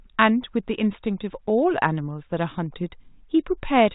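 No technical faults can be heard anywhere in the speech. The G.726 ADPCM path at 32 kbit/s is working as intended, keeping the sound within the telephone band below 4 kHz with only a light trace of coding noise.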